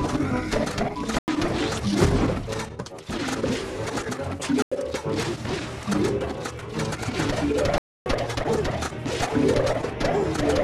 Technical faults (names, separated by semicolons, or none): corrupt frame muted